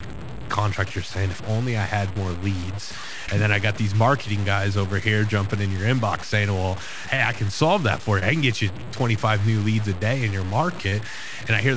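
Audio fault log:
throughout, low bit depth without dither: a coarse, gritty distortion rides on the speech everywhere and changes with it, sitting only about 15 dB below the signal. Quiet passages and trailing ends break up into grain or sputter between neighbouring levels instead of fading smoothly. The steps sound like roughly 5 bits of resolution, likely cut down by plain truncation with no dither, so the rounding error stays locked to the waveform rather than becoming a steady hiss.
3.26 s, 7.16 s, 8.20 s, 10.90 s, short concealed packet loss: at each of these points about 20 ms of the call failed to arrive, and the receiver bridged the gap by extending the preceding sound for roughly 16 to 21 ms before blending back into the real audio. Each instance is heard as a brief smear or wobble. Because the filler is an estimate rather than the lost audio, a short consonant falling inside a gap can disappear entirely.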